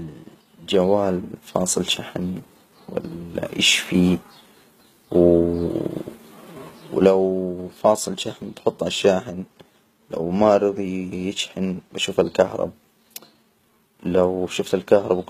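Throughout the speech, the encoder has likely been starved of bits by HE-AAC compression at a rate fitting about 20 kbps, rebuilding the treble by copying lower bands upward. The highs stay bright but false, so sibilants come out gritty, metallic and lispy.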